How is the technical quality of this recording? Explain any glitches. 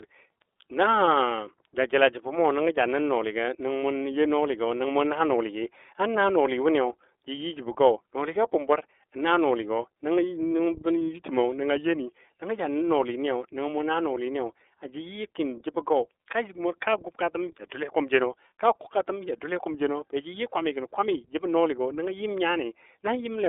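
The recording is limited by narrowband codec coding from start to finish. Throughout, the iLBC codec confines the speech to roughly 300 Hz–3.6 kHz and codes each frame's excitation independently, consistent with 30 ms frames at 13.33 kbps. The result sounds plainly rough and synthetic. A spectrogram shows a hard ceiling near 3.6 kHz, an empty band below 300 Hz, and smeared, grainy harmonics.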